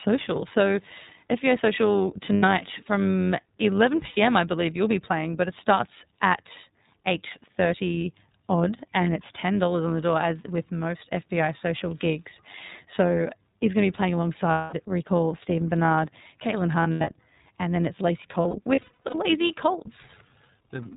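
Throughout the speech, an overlap-add ripple swings the level by about 6 dB at around 100 Hz. The result is a metallic buzz with extra tones around each note, whose rate stays fixed no matter the voice's pitch, unlike natural vibrato. The iLBC codec runs throughout as well, which fits 13.33 kbps with 30 ms frames. It removes everything above 4 kHz and leaves a plainly synthetic graininess. That sounds distinct from the ripple's regular pulsing.

Lost iLBC frames, bridged by repeating the last pitch cycle mixed with noise, turn gaps into a held, buzzy vowel. The first is 90 ms at 2.34 s, and another 90 ms follows at 4.07 s, just before "I believe you'll be". A longer 210 ms loss at 14.52 s comes after "going to be playing". At 16.83 s, 150 ms is lost across 240 ms just before "and then it's". Finally, 360 ms is lost across 18.42 to 19.15 s. The voice recovers almost immediately each time, which separates these from dropouts that leave silence.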